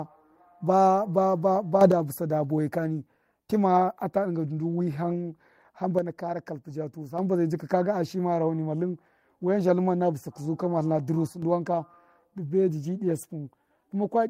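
Sudden gain jumps at 1.81–1.92 s (up about 6 dB), 5.99–7.18 s and 11.27–11.42 s (down about 6 dB): level and background noise step together, likely from unramped digital gain changes.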